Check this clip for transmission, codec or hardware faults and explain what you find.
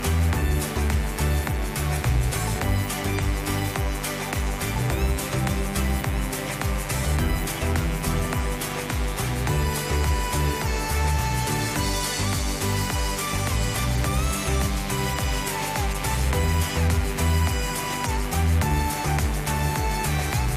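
One fault runs through the whole clip: mains buzz. A steady, raspy buzz sits under the sound from start to finish, strong enough to be clearly heard, roughly 10 dB below the wanted audio. It is built on a 50 Hz mains supply. Something like a dimmer, a rectifier or a poorly shielded cable lets sharp switching spikes in twice per cycle, and their harmonics of 50 Hz stretch up into the kilohertz range, giving the edge.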